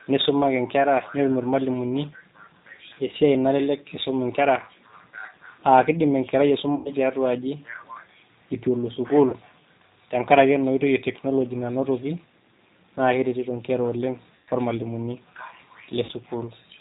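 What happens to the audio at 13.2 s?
At 13.2 s, as throughout, the speech carries G.729 codec damage, sounding rough and synthetic with nothing above 4 kHz, consistent with an 8 kbit/s model-based coder. Unlike a plain low-pass filter, which only dulls the sound, this rebuilds speech from a filter and sparse pulses, so it turns buzzy rather than merely muffled.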